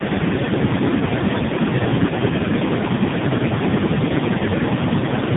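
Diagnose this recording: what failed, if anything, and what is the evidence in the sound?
The codec stage failed here: tandem speech coding across the whole clip. The speech sounds rough, muffled and warbly, with nothing above 3.7 kHz, which points to about three speech codecs in a row, ending in CVSD, each one re-coding the previous one's damage.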